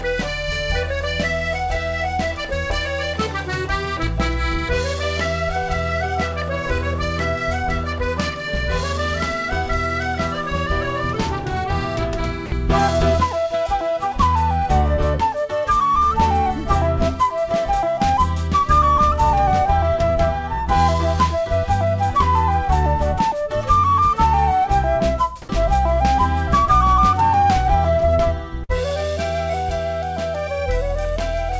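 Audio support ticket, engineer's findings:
12.46–12.52 s: sound cuts out for 60 ms, replaced by steady low-level noise. Likely sound dropped by the voice detector. Sender's detector judged the passage to be background and stopped transmitting. Receiver inserted comfort noise until the detector triggered again.

28.64–28.71 s: burst of packet loss. About 50 ms of concealment, where the last sound is stretched and fades down. Playback then resumes further on, with 60 ms of audio missing. Jitter buffer had no packets to play.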